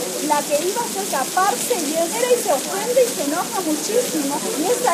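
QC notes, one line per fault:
2.09 to 2.15 s, damaged data in a compressed stream: a brief glitch of about 50 ms breaks into the sound. Corrupted bytes in the encoded stream make the decoder misread those frames, lose sync, and output garbage until it locks onto the next valid frame header.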